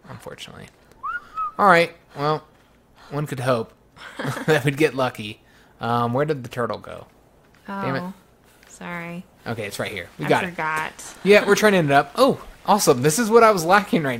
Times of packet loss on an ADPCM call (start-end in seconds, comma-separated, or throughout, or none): none